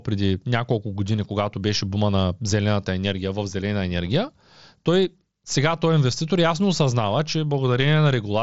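No technical faults can be heard in this speech clip. It comes over a Bluetooth headset link using the mSBC codec, so nothing reaches above about 7.7 kHz, and there is a light coding grain on the louder sounds.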